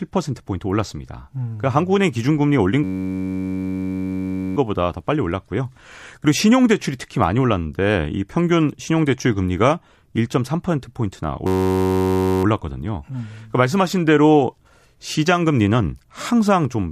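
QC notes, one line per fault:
2.84–4.57 s and 11.47–12.44 s, system hang loop: in both stretches the speech gives way to a steady buzz at about 93.8 Hz. A single 10.67 ms slice of audio repeats exactly, over and over, which fits a 512-sample ring buffer being replayed while the system stalled. Because each repeat is identical, the buzz has a fixed pitch and timbre, unlike mains hum or random crackle. The loop is too short for a stutter, and the speech resumes with essentially nothing missing.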